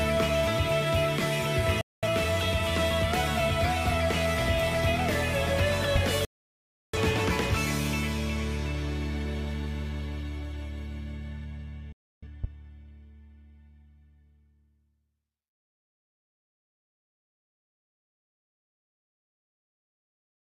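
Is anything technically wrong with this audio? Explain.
Yes. The audio has two kinds of fault: digital broadcast dropouts and loud pops.

Digital broadcast dropouts occur at 1.81 to 2.07 s, 6.25 to 6.97 s and 11.92 to 12.27 s. The receiver stopped getting valid frames and muted. It fades out in about 3 ms, so each cut is abrupt. The gaps last about 213 ms, 683 ms and 299 ms. Those lengths fit frames of roughly 43 ms each. The audio comes back later, and nothing from the gap is recovered.

Loud pops occur at 5.96 to 5.98 s and 12.44 to 12.46 s. Each is a single sharp pop. The first peaks about 15 dB above the surrounding audio, and the second about 10 dB. The audio carries on underneath both. The likely cause is a sudden voltage step or pulse, for example from a switch, static or a driver glitch. The following circuitry shapes that pulse into a short burst.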